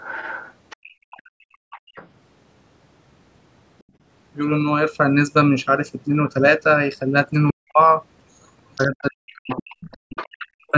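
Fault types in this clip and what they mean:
Other side's voice leaking through: from 0.00 to 2.08 s and 8.75 to 10.71 s a second voice sits roughly 15 dB under the talker, with a faint trace at 3.79 s. This is likely loudspeaker playback that the echo canceller left in the microphone signal.
Background gated by the echo canceller: the room sound falls away from 0.77 to 1.95 s by about 37 dB, from 3.83 to 4.01 s by about 24 dB, and at 9.98 to 10.09 s by about 40 dB, as the canceller clamps the microphone during playback.
Speech suppressed in double talk: from 7.51 s to the end, the talker's voice dips and breaks up, by around 40 dB at worst over roughly a second in all. Likely both sides spoke at once, and the canceller turned down the talker along with the echo.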